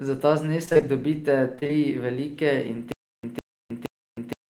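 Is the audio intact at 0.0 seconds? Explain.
Yes, the speech at 0.0 seconds is intact, with no fault audible at that moment.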